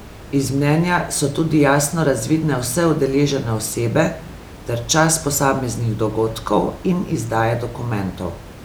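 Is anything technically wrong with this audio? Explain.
No, nothing is technically wrong here; the speech sits about 18 dB above the room's own background noise, which is part of the recording rather than anything the system introduced.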